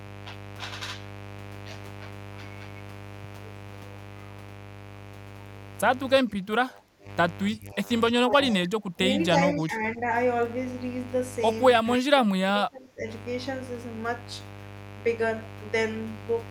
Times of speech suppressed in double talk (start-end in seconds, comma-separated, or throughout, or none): 6.23-7.08, 7.51-7.89, 8.15-8.99, 9.31-10.05, 11.83-13.03